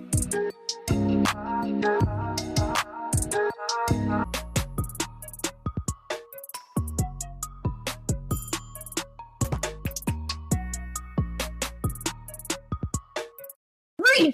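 No technical faults can be heard anywhere in it.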